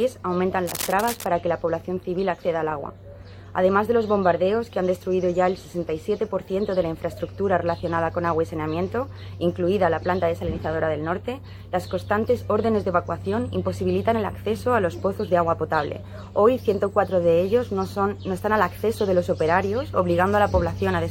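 Cable scratch noise appears from 0.66 to 1.30 s: a dense, uneven burst of scratching and rustling sits over the sound, about 10 dB quieter than it. The likely cause is a worn cable or connector being moved, its contact resistance fluctuating rapidly.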